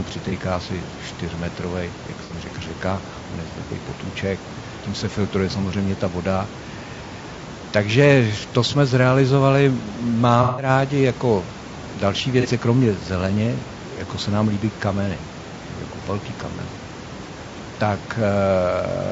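It's a speech clip, and the whole thing has a rough, grainy texture: noise fills in between the harmonics and the top end sounds thin and a bit synthetic. That's most likely low-delay AAC compression, AAC-ELD, the kind video calls use. Its short frames can't resolve pitch harmonics well, and the damage is plain enough to fit a bitrate around 32 kbps. On top of that there's AAC frame loss with concealment in five spots: 0.29–0.33 s, 2.24–2.32 s, 4.76–4.81 s, 10.43–10.69 s and 12.41–12.46 s. The short ones, about 30 to 60 ms, come across as brief smeared, noisy patches where the decoder patched over the gap from the last good spectrum. The one at 10.43 s runs about 150 ms, which fits several consecutive lost frames, so the concealment is stretched much further. There's also some room noise sitting about 17 dB under the speech, which is just part of the recording.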